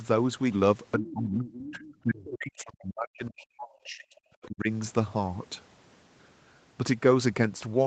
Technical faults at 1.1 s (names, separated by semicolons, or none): speech suppressed in double talk; other side's voice leaking through